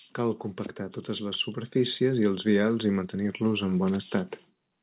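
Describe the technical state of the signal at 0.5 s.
At 0.5 s the speech is intact, with no fault present, only the narrow, telephone-like band of a call path that carries nothing above about 4 kHz.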